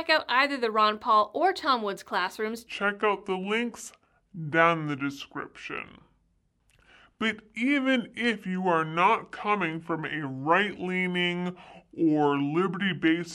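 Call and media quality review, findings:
Section at the wrong speed, 2.67 s to end of clip. Speech drops to about 0.7x speed, pitch down roughly seven semitones, slow and deep throughout. Likely playback or editing path clocking this segment against the wrong rate.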